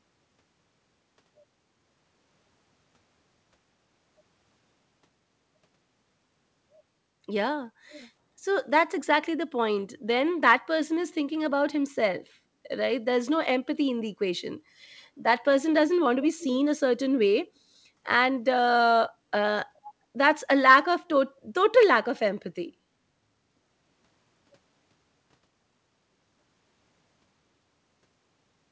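At 7.9 to 8.08 s, 8.99 to 9.03 s and 16.39 to 16.44 s, faint scraps of the speech return about 0.4 s late: 399 ms for the first two, 418 ms for the third. This is an echo leak, likely from a far-end loudspeaker whose echo canceller let residue through. The scraps sit roughly 20 to 25 dB below the speech. On a spectrogram they show as weak repeats of earlier harmonic patterns, band-limited like everything else to below 8 kHz. On the waveform they appear as small bursts trailing the louder speech.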